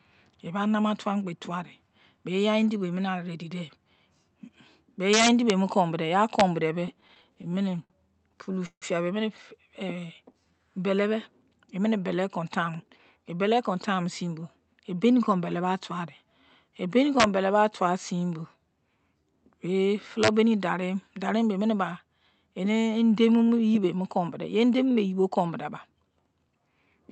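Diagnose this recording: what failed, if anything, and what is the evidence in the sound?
Integer overflow in the sample-format conversion or gain arithmetic. Violent cracks land on loud speech at 5.13 to 5.50 s, 6.40 s, 17.20 to 17.24 s and 20.23 to 20.28 s. They are much harsher than clipping. Peaks driven past full scale, by about 6 dB in the first burst and about 1 to 2 dB in the others, wrapped to the opposite sign instead of being limited. Each excess peak jumps across the whole range.

Repeated stalls (stutter) on the network side, at the jitter buffer of this Opus call path. Its 8 kHz audio bandwidth can be heard in the dull top end. From 6.73 to 7.93 s the speech catches 16 times. The buffer ran empty and the receiver stretched the last sound, for 205 ms in total, with the longest gap 58 ms. From 8.32 to 8.85 s there are 5 longer drags, covering 199 ms and up to 157 ms each. Nothing is lost. 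The speech just drags.

Jitter buffer slow-down follows, from 9.79 to 10.60 s. Speech runs at 89% speed with unchanged pitch, and sounds are drawn out. The receiver was rebuilding its reserve. It repeated single pitch periods and slivers of pauses many times in a row, adding 98 ms. The result is a stretched passage rather than gaps.

Jitter buffer speed-up, from 12.42 to 14.22 s. Speech runs at 112% speed and sounds hurried, yet pitch stays put. The buffer had collected more audio than it targets, as happens when delayed packets arrive in a bunch. To cut the delay, the receiver dropped short pieces of one or a few pitch periods over and over. Together they removed about a fifth of a second.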